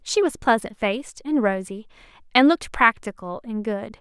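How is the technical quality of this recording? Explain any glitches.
No glitches can be heard anywhere in the recording: the speech signal stays continuous and stable throughout, with nothing in it that points to a technical fault.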